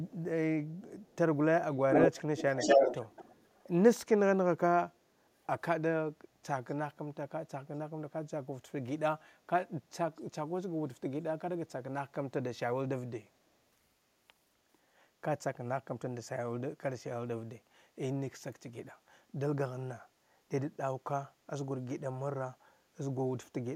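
A faint, delayed copy of the speech trails the talker at 1.02 to 1.16 s, then returns much more strongly from 1.92 to 3.64 s, where the repeat is about as loud as the original or louder. Brief, very quiet scraps recur at 6.68 to 6.74 s and 10.17 to 10.21 s, each lagging by 243 ms. This is echo leak, likely from a far end on loudspeaker whose echo canceller let part of its microphone pickup return down the line.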